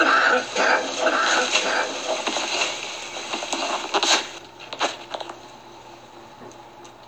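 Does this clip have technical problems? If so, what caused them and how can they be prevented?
Yes. From 1.06 to 4.38 s the sound is heard twice, with a second copy about a second behind and about 5 dB quieter, clean and dry, switching on and off abruptly. This doubled audio track is likely from a slower second capture path or misaligned edit. Prevent it by routing each source through only one path and checking edits for stacked copies.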